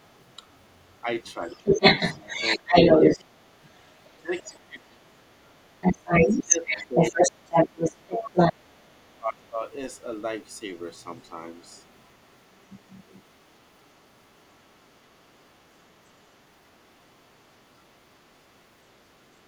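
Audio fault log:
0.04–19.23 s, other side's voice leaking through: the echo canceller likely failed to remove the loudspeaker signal, so a second voice runs underneath, at about the level of the talker or louder.
1.37–1.80, 2.57–3.35, 4.23–5.18, 6.20–7.22 and 7.94–9.59 s, speech suppressed in double talk: the canceller likely confused the talker with the echo and turned both down, so the voice dips sharply, by roughly 15 to 30 dB.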